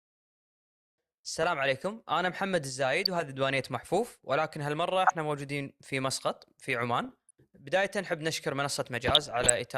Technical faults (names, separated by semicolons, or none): DAB burbling